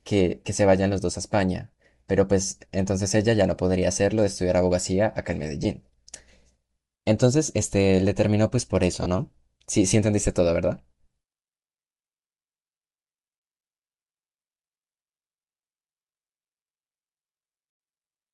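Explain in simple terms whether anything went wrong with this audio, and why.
Bluetooth LC3 compression, throughout the whole clip: the speech has a breathy, grainy edge, most likely because it passed through LC3, the codec used by Bluetooth LE Audio. To save data, the codec chops the sound into short slices, around 10 ms each, and throws away much of the high-pitched detail. It fills those gaps with hiss, and the damage is plainly audible here as a rough sheen over the voice.

Lost LE Audio frames, at 5.64 s and from 9.03 to 9.06 s: the first is a single missing 10 ms slice, the second three in a row, about 30 ms. When a slice never arrives, the decoder patches the hole by reusing the last slice it received, with its pattern scrambled.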